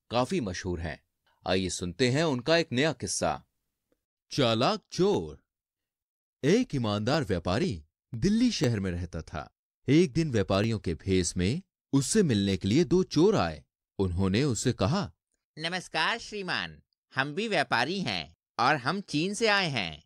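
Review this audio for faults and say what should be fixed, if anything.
Periodic USB or driver dropouts from 5.14 to 10.64 s: about ten regular ticks every 0.5 s, each a roughly 1 ms skip where a blocking background task interrupted the stream. Prevent this by disabling power-saving on the USB port and removing or rescheduling the periodic background process that stalls the audio driver.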